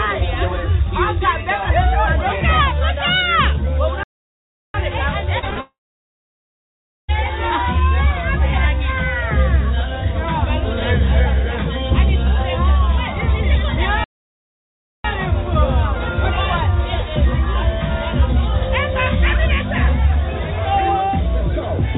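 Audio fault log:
4.03–4.74 s and 14.04–15.05 s, playback stall. The sound stops in mid-flow and the output goes silent, first for about 0.71 s and later for about 1.0 s. It then carries on. The likely cause is that the player ran short of data or its thread was held up, so nothing reached the output until it recovered. Because these are clean gaps, they sound like the audio freezing rather than breaking up.
5.39–5.59 s, short concealed packet loss. Three brief holes appear in quick succession, at 5.39–5.44 s, 5.50–5.54 s and 5.54–5.59 s. About 40 ms goes missing first, then about 20 ms twice. The receiver fills each hole by extending the last sound and then blends back into the real audio. Each one is heard as a quick smear or wobble within the band-limited call audio, which has nothing above 4 kHz.
5.61–7.10 s, long network dropout. About 1.48 s of audio is lost, right after the short losses. 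The receiver briefly continues the last sound as a fading buzz or hiss. After that, roughly 1.35 s of silence follows. The audio resumes further on, and the missing stretch is never heard. The likely cause is that no packets arrived for that whole period, so concealment ran out and left only silence.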